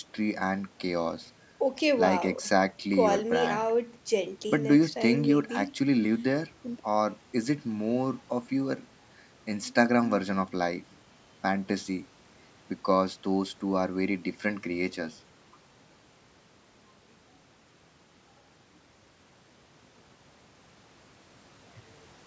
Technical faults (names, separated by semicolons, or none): none